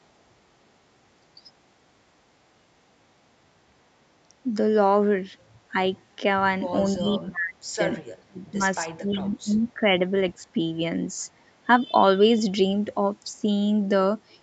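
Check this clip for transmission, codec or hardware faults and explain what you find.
One fault recurs: speech suppressed in double talk, at 1.37–1.44 s, 6.96–7.8 s, 8.23–8.61 s, 8.84–9.89 s and 13.37–13.46 s. The echo canceller likely mistook the talker for loudspeaker echo while the far side spoke, and turned everything down. The speech briefly sinks by roughly 10 to 35 dB, deepest in the stretch from 8.23 s.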